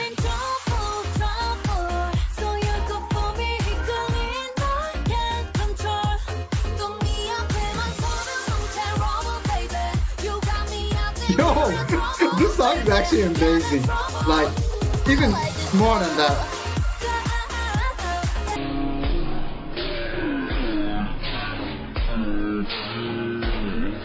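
From 18.56 s to the end, a wrong sample rate drags the sound to one-third speed and about 19 semitones lower, which fits 48 kHz material played at 16 kHz. On a spectrogram, features stretch threefold in time and crowd into the bottom third.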